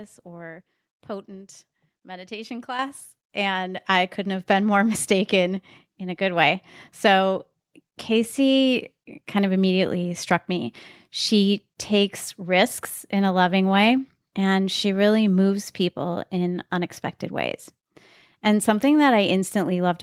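At 2.79 s, right after "or potent meditation", the microphone volume stepped up by about 8 dB, and at 3.81 s, just before "I couldn't have been", it stepped up again by about 4 dB. Each time the input gain was raised in a single jump, so voice and background noise grow louder together. On a waveform the envelope widens abruptly at each point; on a spectrogram every frequency brightens at once, noise floor included.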